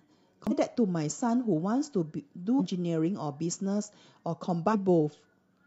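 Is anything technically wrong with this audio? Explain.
Yes. The speech carries damaged data in a compressed stream, heard three times: 0.47 to 0.52 s, 2.56 to 2.61 s and 4.69 to 4.75 s. Each time, a stretch of the encoded bitstream is corrupt, so the decoder misreads those frames, loses sync and hunts for the next valid frame header before normal decoding resumes. Each event lasts about 50 ms and comes across as a short chirp, squawk, click or hole cutting into the speech.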